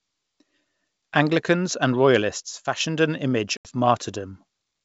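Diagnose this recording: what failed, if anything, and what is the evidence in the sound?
From 2.40 s to 2.81 s one channel drops out. The speech falls abruptly by about 6 dB and recovers just before "an image". That step is what a mono sum does when one leg of an otherwise matched stereo pair vanishes, leaving only the surviving channel's half of the common signal. The stage is the analogue wiring or connector ahead of the converter, and the likely cause is an intermittent contact on one side.

At 3.57 s to 3.69 s, just after "an image", there is packet loss on an ADPCM call, a network-stage fault. An 80 ms hole with hard edges replaces the sound, roughly several packets' worth. The decoder's adaptive predictor and step size keep evolving from stale state while the sender's move on, so the resumed audio is briefly slightly distorted until the two resynchronise over some tens of milliseconds. 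The G.722 wideband coding beneath it at 64 kbit/s contributes only its faint upper-band hiss.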